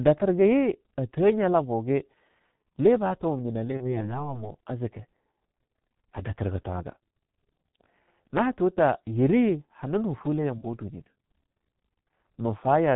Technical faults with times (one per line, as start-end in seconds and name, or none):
0.00-12.95 G.723.1 codec
3.77-4.10 VoIP packet loss concealed by the speech codec
10.58-10.65 VoIP packet loss concealed by the speech codec